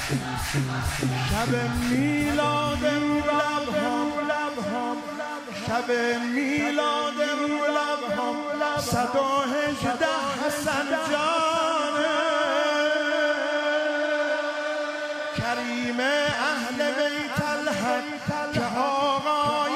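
At 8.13 to 8.18 s, compressed frames were skipped: a single compressed frame, 46.4 ms long, never reached the output, either missing from the stream or discarded by the decoder as damaged. The audio therefore jumps ahead by around 50 ms, and the sound resumes slightly further along than it should.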